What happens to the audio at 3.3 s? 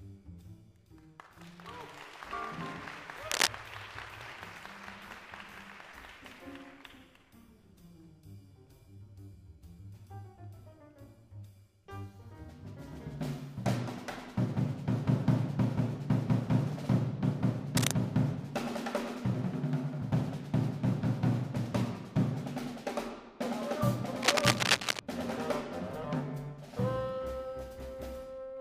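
From 3.31 to 3.47 s a burst of cable scratch noise cuts in: dense, irregular crackling and rustling, roughly 5 dB louder than the underlying sound. The likely cause is a worn cable or connector being moved, its contact resistance fluctuating rapidly for about 160 ms.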